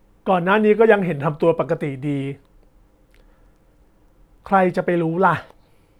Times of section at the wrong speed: none

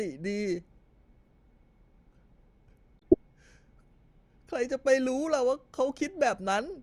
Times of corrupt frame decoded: 2.99-3.14

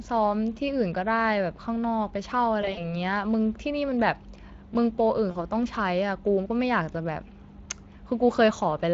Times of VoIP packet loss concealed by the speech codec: 2.61-2.93, 5.31-5.37

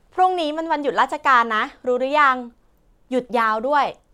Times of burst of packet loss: none

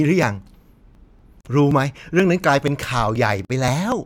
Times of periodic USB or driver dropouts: 0.23-3.92

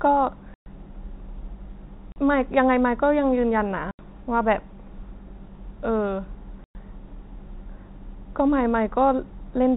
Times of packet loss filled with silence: 0.54-0.66, 2.12-2.16, 3.91-3.99, 6.64-6.75

